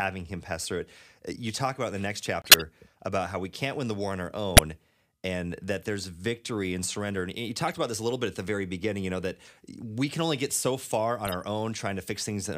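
At 2.42 s, after "about in the next", the sound drops into a corrupt frame muted gap lasting about 0.2 s until "about how we can't". The decoder rejected damaged frames, several codec frames' worth by the length, and the player substituted silence. The waveform shows a flat line with abrupt edges, and the spectrogram shows a blank vertical band.

Corrupt frame decoded errors follow at 4.57 s after "the war on our", at 7.68 to 7.77 s, and at 11.25 to 11.34 s after "only get so far". Each time, garbled frames were played anyway, and misread gains and codes put energy at the wrong frequencies. The results are a loud error peaking around -5 dBFS, then quieter errors near -20 and -25 dBFS, showing as short patches of misplaced energy.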